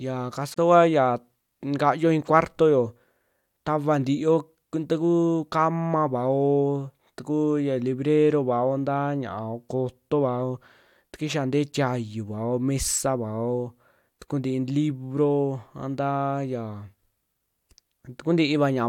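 Separately encoded pieces of the speech were joined without trimming the encoder's start-up delay and end padding, leaving a gap at a join of encoded pieces from 0.54 to 0.58 s. A silence of about 34 ms opens, smeared at its edges, before the speech resumes where it stopped.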